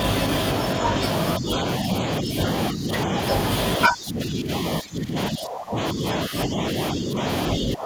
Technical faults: speech suppressed in double talk

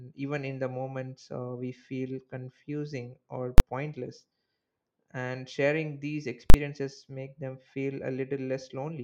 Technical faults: invalid numbers at full scale

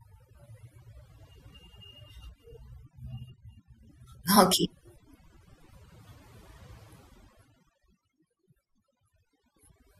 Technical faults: overdone noise removal; compressed frames skipped

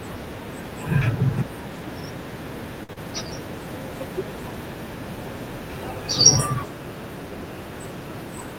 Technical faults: short stall from a late packet; short concealed packet loss

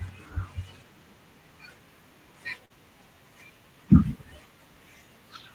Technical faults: short concealed packet loss

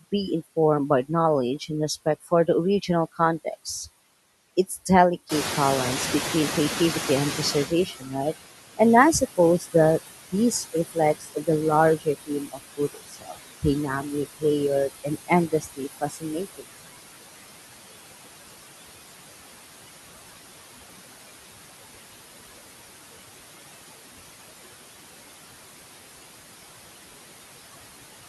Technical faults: noise suppressor artifacts; noise suppressor catching up; speech cut by the noise suppressor

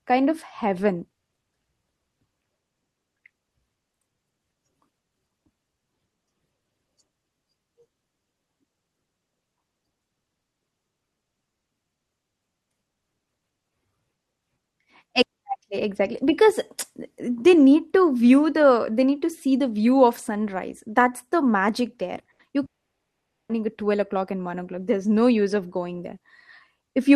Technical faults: short concealed packet loss; burst of packet loss; long network dropout

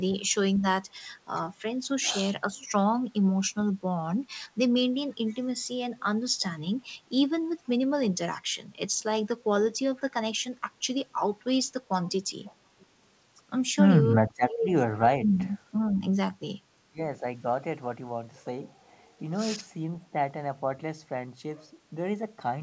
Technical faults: speech suppressed in double talk; echo leak

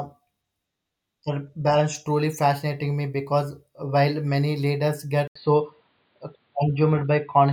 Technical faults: input switched to a poorer device

